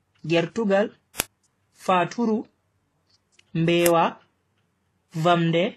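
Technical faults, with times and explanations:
Throughout: transcoding between lossy codecs. Nothing above 12.3 kHz, with the artefacts of both codecs heard together, likely a low-bitrate HE-AAC stage re-encoded as WMA.
1.2 s and 3.86 s: uninitialised buffer. Each is a loud 1.45 ms crack, fitting a 64-sample block played before it was filled.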